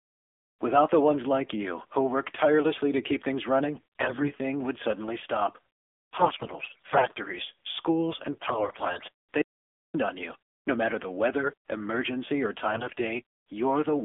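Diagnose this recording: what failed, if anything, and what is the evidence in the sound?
The codec stage is the source: the speech went through AMR narrowband mobile coding, and its sound points to the low 7.4 kbps mode. The band runs only from about 250 Hz to 3.5 kHz, and the vocal-tract model at this rate leaves the voice plainly buzzy and synthetic throughout.

The radio link delivered AMR bit errors. Flipped, weakly protected bits misplaced the excitation pulses and skewed the fine pitch, gain and spectral values, so the voice keeps its pitch and level but turns hoarse and gargly. This happens at 3.74–4.30 s, after "tirelessly to keep things" and before "would suddenly stop", then at 6.18–7.19 s right after "would suddenly stop". It returns at 8.32–9.05 s and at 12.74–12.93 s following "the weather emergency or". The second burst has the highest error rate, about 20%.

From 9.42 to 9.94 s, about 0.52 s, the audio drops out to silence with no room tone, and speech resumes mid-flow. 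The likely cause is lost input upstream of the encoder, such as a failed link or momentary mute, with silence written in its place.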